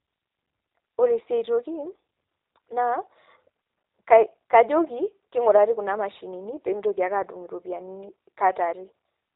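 A speech recording carrying plainly audible G.729 codec damage from start to finish. Nothing reaches above 4 kHz, and the voice sounds rough and slightly synthetic, as each 10 ms frame is rebuilt from a vocal tract model, a pitch predictor and a few sparse pulses rather than the real waveform. That buzzy, artificial grain is what separates it from a clean narrowband telephone line, which loses the same highs but keeps a natural voice. The sound fits an 8 kbit/s stream, likely the G.729A variant.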